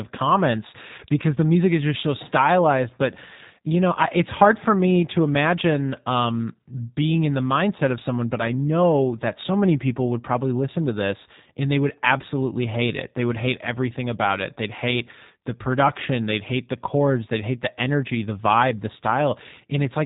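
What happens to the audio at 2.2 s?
At 2.2 s the speech is passing through the G.729 codec, as it does for the whole clip. The sound fits a G.729A encoding at 8 kbit/s, which discards the waveform and rebuilds each 10 ms frame from a vocal tract filter, a pitch predictor and a handful of coded pulses. The result is plainly audible: nothing above 3.8 kHz survives, so the speech sounds muffled and band-limited, with a rough, slightly synthetic buzz.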